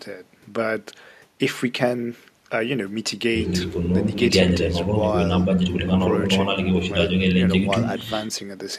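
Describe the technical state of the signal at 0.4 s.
At 0.4 s the speech signal is intact, with no audible fault at that moment.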